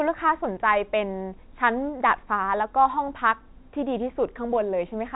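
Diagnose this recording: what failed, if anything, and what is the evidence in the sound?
No failure found in this recording.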